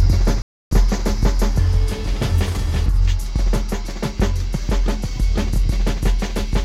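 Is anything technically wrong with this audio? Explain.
Yes. From 0.42 to 0.71 s the music drops to silence for about 0.29 s, then resumes, likely a Bluetooth stall where delayed packets let the headphones' buffer run dry.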